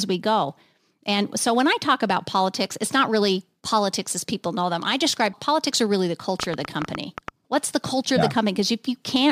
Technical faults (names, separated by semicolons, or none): train of clicks